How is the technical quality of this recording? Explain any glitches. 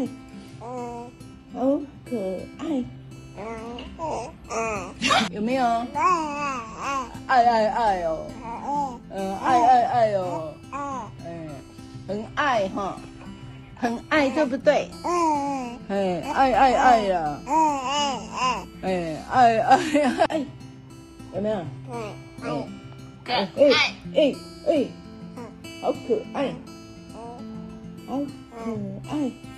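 No glitches turn up anywhere in this recording, so there's nothing to explain.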